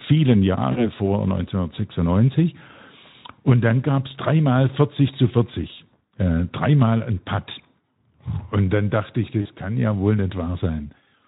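Twice, VoIP packet loss concealed by the speech codec shows up: packets went missing and the decoder filled the gap by extending its last pitch and filter while lowering the gain. From 0.71 to 0.89 s, and again from 9.41 to 9.49 s between "dann dachte ich" and "kann ja wohl", the speech smears into a brief buzzy tone or coloured noise that fades, consistent with about 40 ms of lost audio. It stays weakened a little past the gap, within the light Speex coloring heard elsewhere.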